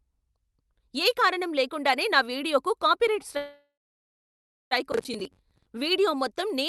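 At 3.37 s the speech stops and the last sound trails into a short fading buzz, then about a second of silence until 4.73 s. That's a call audio freeze, likely from packets stalling so the jitter buffer ran dry. The speech resumes where it stopped, just pushed about 1.35 s later, with nothing lost.

Then from 4.92 to 5.67 s there's a gritty, tearing crackle riding on the speech: processor overload crackle. The processor kept missing its deadlines, and each miss replayed a stale chunk of old audio with hard edges. The rhythm fits buffers of roughly 10 ms, with something like twenty misses in that stretch.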